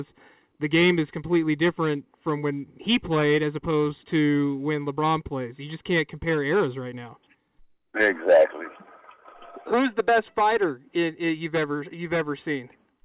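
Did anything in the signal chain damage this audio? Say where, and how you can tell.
No, nothing in the signal chain damaged this audio. It went through a WebRTC call path, and the absence of any content above 4 kHz fits a narrowband G.711 mu-law codec working as intended.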